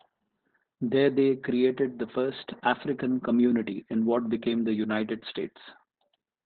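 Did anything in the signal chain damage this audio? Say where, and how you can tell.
Yes, at the codec stage: Opus voice compression runs through the whole clip. The speech is muffled with nothing above 4 kHz, and it sounds hoarse and faintly robotic. That fits narrowband SILK near 8 kbps. Unlike a plain low-pass filter, coarsely coded excitation roughens the voice itself.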